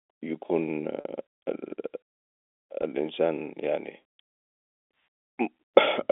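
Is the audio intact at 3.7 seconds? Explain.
Yes, the speech at 3.7 seconds is intact, with nothing there beyond the narrow band of the G.711 telephone coding it passes through.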